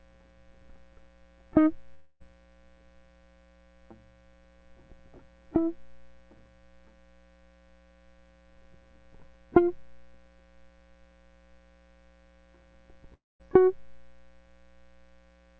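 Around 1.94 s the music suddenly smears into a buzzy, hissy continuation of the last sound. It runs until about 2.22 s, then the music picks up further along, so about 260 ms is simply gone. At 13.14 to 13.41 s the same thing happens again, but the buzz dies away fast and most of that gap is silent. Both are likely a long network dropout with the receiver's concealment filling in, and the G.722 call path keeps everything below 8 kHz.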